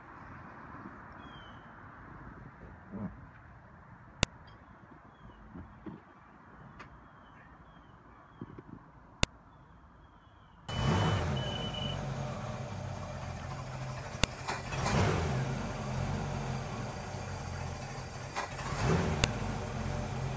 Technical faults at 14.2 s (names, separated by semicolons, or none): file header played as audio